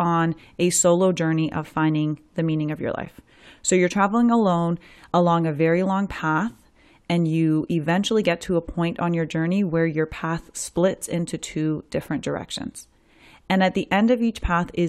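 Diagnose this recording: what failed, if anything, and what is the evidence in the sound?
A gap between stream segments at 3.05 s: the speech drops into a hard-edged hole of about 10 ms, then resumes exactly where it left off. This is a playback-stage timing fault. Two consecutive segments' timestamps did not quite meet at the boundary, so the player inserted silence rather than losing any audio.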